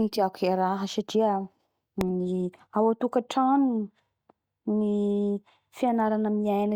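At 2.01 s the speech is hit by a single sharp bang: invalid numbers at full scale. A calculation returned infinite or undefined values, pinning the output to maximum level for roughly 0.67 ms, which fits a 32-sample block. The span is too short to separate into a pop at each edge, so it lands as one bang. Unlike clipping, nothing of the signal survives inside it.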